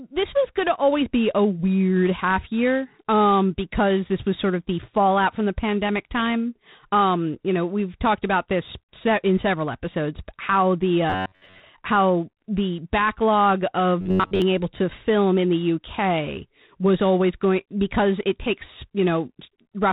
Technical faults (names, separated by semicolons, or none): G.726 ADPCM; robotic sound from repeated short buffers